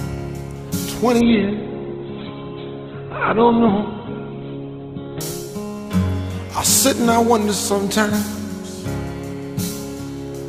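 From 1.21 to 5.21 s, an adaptive stream at a lower bitrate: a slowed connection forced a leaner encoding, so nothing above 4.2 kHz remains and codec artefacts rise. The switch is sudden but leaves no gap, unlike a dropout.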